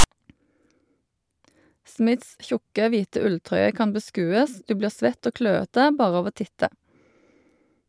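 At the very start, from 0.00 to 0.04 s, a short burst of static cuts in. This is file tags played as audio. A block of text metadata was decoded as samples. The text bytes give a loud, lopsided rasp with hard edges before the speech begins.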